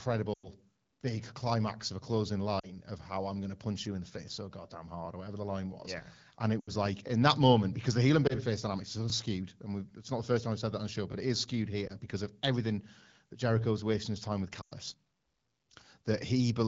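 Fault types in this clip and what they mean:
lost AMR speech frames: Failed radio frames made the wideband decoder conceal gaps by reusing the last good pitch and vocal tract settings with falling gain. Single-frame losses near 8.27 and 11.87 s give a brief dip or warble. The longer runs of 40 to 100 ms drop to near silence within two frames, and the voice returns weak or rough. Unlike a plain dropout, the sound decays rather than cutting off hard.
overlapping chunks: Near 1.01 and 7.08 s, about 21 ms of audio plays twice at a join where a new chunk starts before the previous one has ended. The spacing fits chunks of about 2 seconds. It is heard as a click or stutter. Unlike a lost frame, nothing fades or goes missing. Instead a tiny piece repeats, so the sound briefly jumps back on itself rather than dipping in level.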